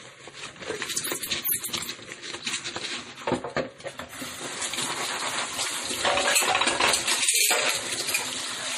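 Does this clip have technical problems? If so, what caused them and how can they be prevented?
Yes: MP3 compression, likely at a low bitrate around 40 kbps, leaves audible swirly artefacts throughout, and a spectrogram shows a hard treble ceiling at 15.3 kHz with flickering gaps. Encode at a higher bitrate or keep a lossless copy.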